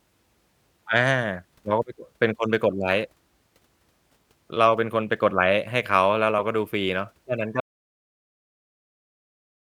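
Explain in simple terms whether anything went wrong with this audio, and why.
Something did go wrong near the end: an audio dropout to silence. At 7.60 s the speech cuts off and silence runs right to the end, with no room tone at all. Most likely the input was lost while recording carried on writing nothing.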